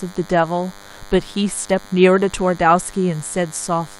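Radio bursts from a nearby DECT cordless phone or base station, arriving every 10 ms, are being rectified in the audio circuit, producing DECT cordless phone buzz throughout the speech: a steady, thin 100 Hz buzz rich in harmonics, sitting well below the speech level.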